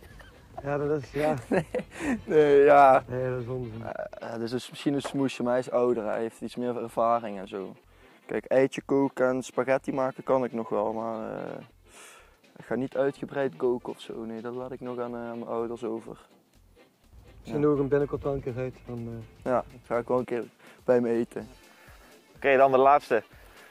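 No technical faults can be heard anywhere in the clip.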